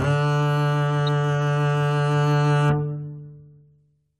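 At 1.07 s a brief, sharp blip appears in the music, a tiny burst of misplaced energy that peaks at around -25 dBFS and is gone almost instantly. This is a corrupt frame decoded: a compressed frame arrived with flipped bits, and the decoder played it instead of discarding it. The misread gains and codes put energy at the wrong frequencies, and because the damage seems confined to a single frame, the glitch lasts only that frame's length.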